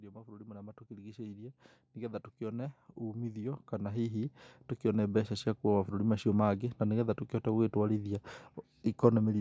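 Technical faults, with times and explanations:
0.12–5.59 s: automatic gain rising. The gain control judged the input too quiet and slowly raised it by about 19 dB, so speech and background swell together.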